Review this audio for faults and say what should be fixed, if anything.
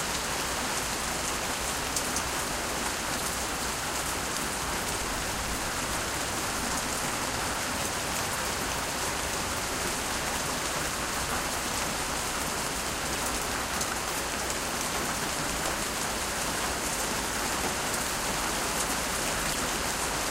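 Short glitches of about 30 ms hit the sound at 3.18, 4.98, 13.14, 14.53, 15.83 and 19.53 s, each jumping ahead. A broken MP3 bit reservoir is the likely cause: after a cut, the next 24 ms frame reads reservoir bytes belonging to another frame. Unlike a plain dropout, which leaves clean silence, these come from misread frame data. To prevent it, cut or splice MP3 audio only after decoding to PCM.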